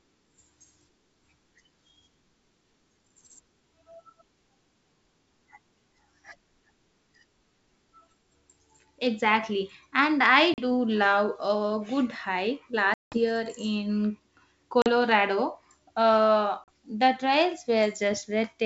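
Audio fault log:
10.54–10.64 s, 12.94–13.19 s, 14.82–14.88 s and 16.64–16.69 s: packet loss on an ADPCM call. Each has a hard-edged silent hole: 40 ms in the short gaps, which suggests about two packets, and 180 ms at 12.94 s, which suggests roughly ten. When the speech comes back, it is slightly distorted, settling within tens of milliseconds. A plain dropout would resume cleanly. This one doesn't, because the decoder's adaptive predictor and step size have drifted from the sender's and must re-converge in the G.722 decoder.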